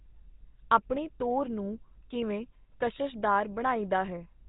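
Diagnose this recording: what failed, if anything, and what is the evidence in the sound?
The codec stage is at fault: the whole speech clip has the buzzy, gravelly GSM full-rate sound and nothing above 4 kHz, which fits a 13 kbps pulse-excited vocal-tract coder.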